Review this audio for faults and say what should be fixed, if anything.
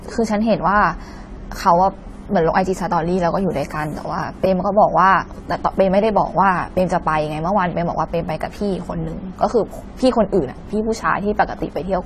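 Throughout the speech, the sound is dull and smeared, with a fizzy, warbling texture on sibilants and sustained sounds and nothing above 14 kHz. This is likely AAC compression, an AAC-LC encode at a bitrate that points to around 32 kbps, leaving a lowered cut-off. Prevent it by encoding from the original source at a much higher bitrate or keeping an uncompressed master.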